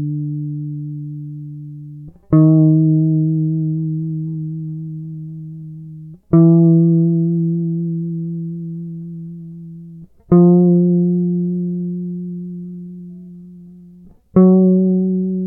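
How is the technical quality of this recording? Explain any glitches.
No technical faults can be heard anywhere in the music, so there are no glitches to explain.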